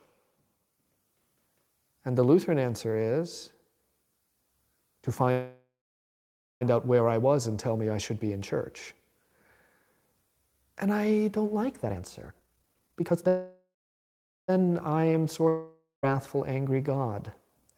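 At 5.31 s the speech stops for about 1.3 s in a call audio freeze: the last sound hangs as a fading buzz, then nearly 0.9 s of silence, before the talk resumes with "out where I". The likely cause is packets held up until the jitter buffer ran dry. Nothing is skipped, which separates it from a dropout.

After "I don't like", from 11.83 to 13.28 s, a jitter buffer speed-up plays the speech at 168% speed, hurried but at unchanged pitch, as the receiver trims about a second of pitch-period slices to shed excess delay.

A second call audio freeze follows at once, 13.28 to 14.50 s, with a fading tail and about 0.79 s of silence.

From 15.49 to 16.05 s, a long network dropout likely lost about 0.54 s outright: a brief fade, roughly 0.15 s of silence, and the speech returns further on, with that part gone rather than delayed.

From 17.08 to 17.71 s, a milder speed-up at 110% removes a small amount, only slightly rushing the last syllables.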